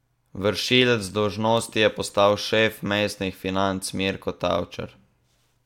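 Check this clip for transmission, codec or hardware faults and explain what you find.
Nothing here points to a transmission, codec or hardware problem; the speech comes across steady and intact the whole way.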